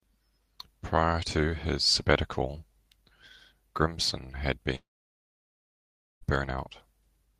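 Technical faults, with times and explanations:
4.75–6.23 s, long network dropout: the speech gives way to a short, fading buzz, then about 1.4 s of silence, and resumes with 1.46 s of sound lost, likely because packets stopped arriving and the receiver's concealment could only briefly extend the last sound.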